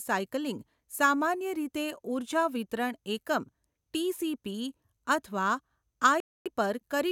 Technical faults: Bluetooth dropout

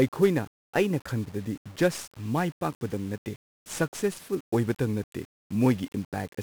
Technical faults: 1-bit DFPWM compression

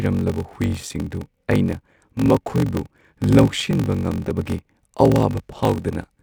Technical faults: block size mismatch (padded)

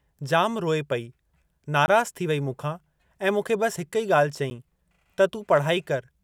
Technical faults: block of digital silence

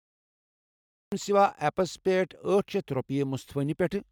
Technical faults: cut-off start

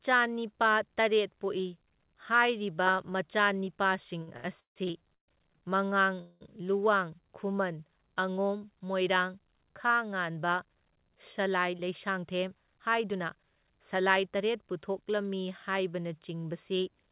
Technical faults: repeated stalls (stutter); call audio freeze; jitter buffer speed-up

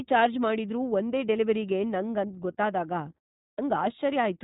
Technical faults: iLBC codec; clipped start after a pause

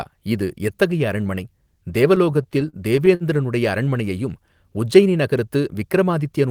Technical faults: repeated stalls (stutter)

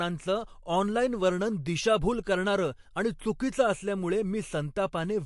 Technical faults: MP3 compression

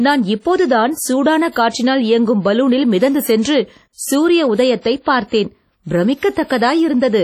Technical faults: WMA compression

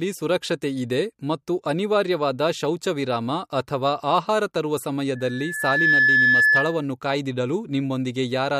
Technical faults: loudspeaker feedback squeal

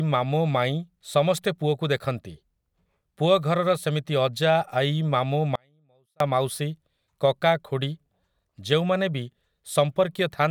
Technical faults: audio dropout to a faint residue

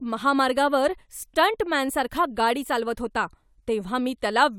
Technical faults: none

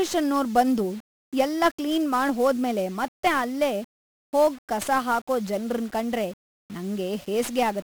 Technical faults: 1-bit DFPWM compression

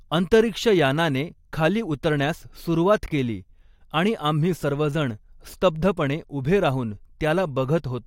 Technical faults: frames out of order

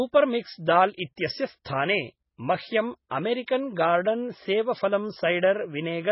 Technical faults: MP3 compression; pre-echo

